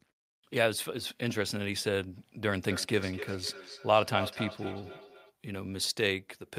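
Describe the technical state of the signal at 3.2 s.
At 3.2 s, feedback echo between two devices (2.56 to 5.35 s) repeats the speech roughly every 300 ms, up to about 10 dB below it, appearing as evenly spaced ghost copies on the spectrogram.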